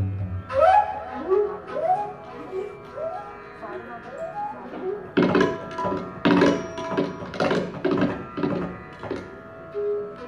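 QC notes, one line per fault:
No technical faults are audible at any point in the audio.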